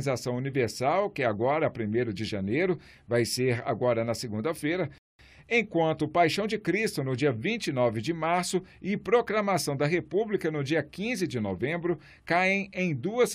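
A rebuffering stall runs from 4.98 to 5.19 s: the player exhausted its downloaded audio and halted until more data arrived. The sound drops to silence for about 0.21 s, then picks up exactly where it left off, losing nothing but adding time.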